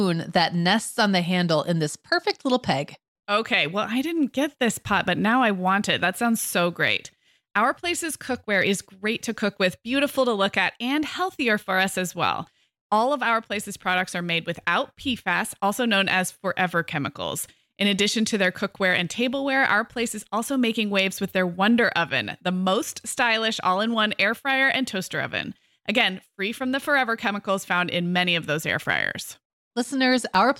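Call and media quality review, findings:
Periodic USB or driver dropouts, 28.85–30.35 s, starting just after "many of those air". Symptom: about four short ticks in speech, exactly 0.5 s apart. Each is a gap of a few milliseconds filled with silence. Probable component: USB audio interface or its driver. Mechanism: a background task blocks the bus or driver on a fixed cycle, so a small slice of audio is lost each time and the signal breaks into an audible tick.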